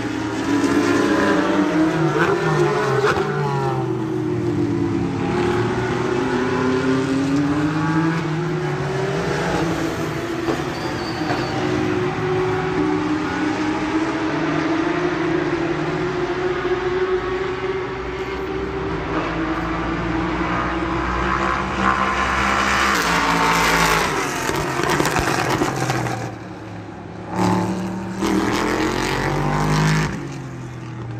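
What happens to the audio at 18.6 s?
Nothing goes wrong at 18.6 s; the audio runs through that moment intact, with no dropout, click, distortion or other fault.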